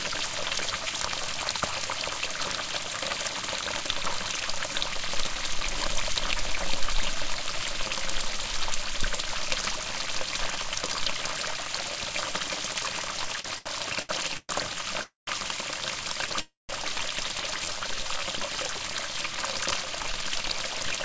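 From 13.36 to 14.51 s the sound stutters through repeated stalls. Packets kept arriving late, the jitter buffer ran dry six times, and about 0.31 s was filled by stretching what came before, a quarter of that stretch. The longest gap is 0.12 s. On a spectrogram, short smeared bands replace the changing detail.

At 15.03 to 15.29 s and again at 16.41 to 16.71 s there is a call audio freeze. The last sound continues as a fading buzz and then drops to near silence for about 0.16 s and 0.18 s. The likely cause is held-up packets emptying the buffer. Each freeze delays everything after it by 0.24 s and then 0.28 s. The waveform shows a decaying tail and then a flat stretch.

From 17.65 to 18.39 s a jitter buffer slow-down draws the sound out. It plays at 85% speed with the pitch unchanged, and 0.12 s is added by repeating single pitch periods. On a spectrogram the harmonics stay level while their features lengthen, and the waveform repeats near-identical cycles.

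From 20.01 to 20.97 s a jitter buffer speed-up runs the audio at 104% speed. About 40 ms is cut out in short pitch-period pieces. The waveform shows small splices with no gaps.

Throughout, nothing reaches above 8 kHz. This band edge fits a G.722 call codec at 64 kbps.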